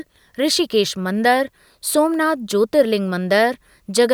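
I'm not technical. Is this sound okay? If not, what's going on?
Yes, the recording is technically sound, with nothing wrong in the signal itself.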